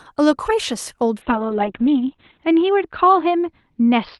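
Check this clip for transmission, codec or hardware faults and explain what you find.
There's one real fault here, a call bitrate drop starting at 1.22 s and running to the end. From then on the speech gets rough and muffled, and the top end shrinks from about 12 kHz to 4 kHz. That fits the Opus encoder being squeezed from roughly 40 kbps down to around 6 kbps after the bandwidth estimate fell. It stays at its worst for about 1.2 s and never recovers before the clip ends.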